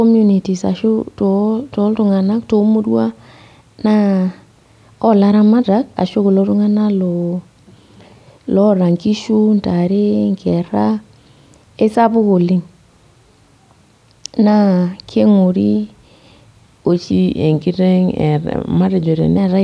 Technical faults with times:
17.12-19.37 wrong sample rate

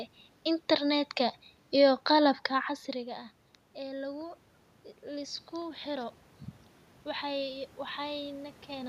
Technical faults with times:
none

